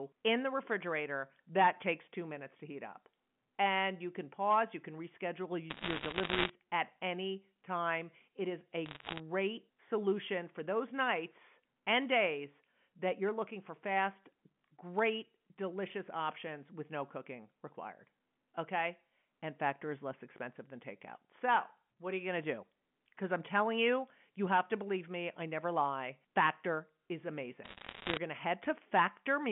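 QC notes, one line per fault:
5.70–6.50 s, 8.86–9.20 s and 27.64–28.17 s, bit errors on a digital phone line: bursts of sharp ticks and crackle over the speech, just before "at any time", between "is a" and "solution for those nights", and before "going to". Flipped bits, around 1 to 2 percent, each corrupt one sample, and sign or high-bit hits jump the level abruptly.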